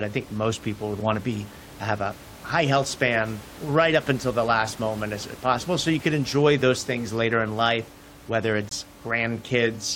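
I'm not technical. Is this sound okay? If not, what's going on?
No. Near the end there's a corrupt frame muted: a small chunk of the compressed audio got damaged, the decoder rejected it, and the player put silence in its place. Right after "later in life whether", the sound cuts out abruptly from 8.69 to 8.73 s, about one frame's length, then resumes on time.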